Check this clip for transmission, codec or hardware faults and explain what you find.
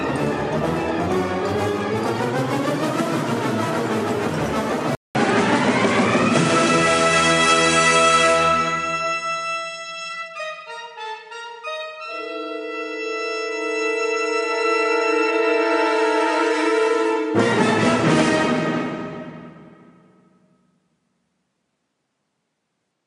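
There's one fault: at 4.95 s the input likely switched to a poorer device, and it stays that way to the end. A 200 ms silence marks the switch, then everything above 10.5 kHz disappears, the level shifts by about 5 dB, and a faint new noise floor, roughly 55 dB down, sits underneath, so the sound turns duller.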